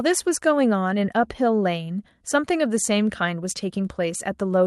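Speech carried over a call link whose codec caps the top end near 12 kHz, as expected for that path, with no technical faults present.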